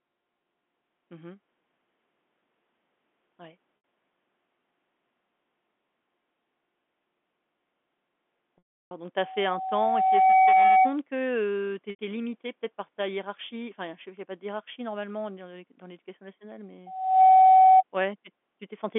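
At 3.77 to 3.82 s, packet loss with pitch repetition occurs. About 70 ms of audio went missing. The receiver repeated the last pitch period to fill it, so the speech briefly holds on a buzzy tone. At 8.58 to 8.91 s, a longer 330 ms loss outlasts the repetition. The held sound fades to silence, and speech cross-fades back in.

From 9.16 to 10.96 s, a loudspeaker feedback squeal rises. The microphone is picking up its own loudspeaker, and the loop gain passes one at 755 Hz. That tone swells over about a second until it stands roughly 15 dB above the speech.

At 11.90 to 11.99 s, just after "heu tu", packet loss with pitch repetition returns. A 90 ms gap is bridged by the repeated pitch period, which gives another short, buzzy hold.

From 16.86 to 17.83 s, just after "dans l'éducation nationale", the same 755 Hz feedback squeal comes back. This time it builds faster, in under half a second, to roughly 15 dB above the speech. 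All of this sits on narrowband G.711 telephone audio.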